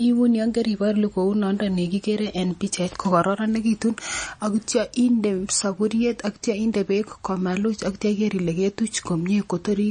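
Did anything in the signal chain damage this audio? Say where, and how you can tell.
Yes. The damage sits at the codec stage and runs through the whole speech clip: nothing is present above 9.4 kHz, and the audio has a plainly audible watery, swirling texture, with s sounds turning metallic and attacks smeared. The likely cause is MP3 compression, with a starved encoder cutting the treble and switching weak frequency lines on and off between frames, which fits a bitrate near 35 kbps. A simple low-pass filter would remove the top without that swirl.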